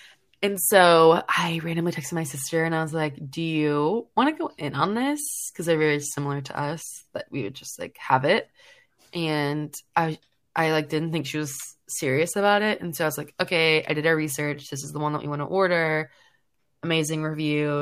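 No technical faults can be heard anywhere in this speech recording. There is nothing to place on a timeline and no point at which the sound breaks, stalls or changes character.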